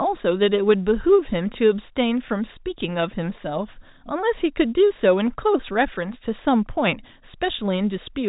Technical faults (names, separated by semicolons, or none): none